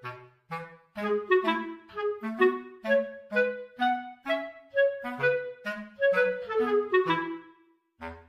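No technical faults are audible.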